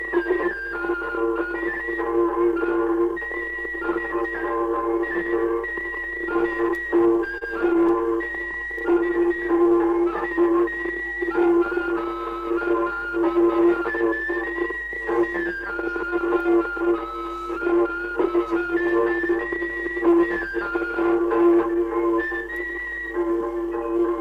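Between 7.01 and 7.91 s the audio shows repeated stalls (stutter): six short hitches, the longest 30 ms, where late packets left the buffer empty and the last sound was held over, about 79 ms in total. Nothing is lost, but the flow catches unevenly, unlike a smooth stretch. From 8.44 to 9.71 s a jitter buffer slow-down follows. Repeated pitch periods add 55 ms, so the sound plays at 96% speed with unchanged pitch. The result is an even drawl rather than separate stumbles, as the receiver rebuilds its reserve.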